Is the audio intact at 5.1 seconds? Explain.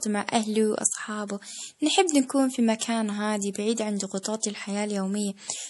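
No. At 5.1 seconds the speech is still carrying damage that runs through the whole clip, likely from MP3 compression at a low bitrate, and the damage is consistent with something like 48 kbps. Short of bits, the encoder drops everything above 11.5 kHz and discards weaker frequency lines, which drift in and out from frame to frame. The result is a dull top end with a watery, swirling texture, metallic chirping on s sounds, and softened attacks.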